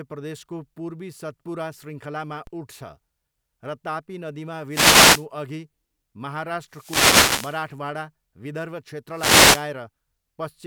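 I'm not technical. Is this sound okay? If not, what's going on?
No. At 2.47 s, right after "प्रदेशको पूर्वी सतपुरा शृङ्खलामा", there's a DC step: the signal's resting level suddenly jumps, giving a single low thump that then fades away. Unlike the static bursts, it's an instant knock, and the voice carries on undisturbed.

Three wireless microphone noise hits follow: 4.69 to 5.26 s (just after "तापी नदीमा"), 6.67 to 7.71 s, and 9.10 to 9.71 s. The radio link briefly weakens, so hiss swells up and partly covers the voice. Each lasts over half a second, a swish rather than a thump.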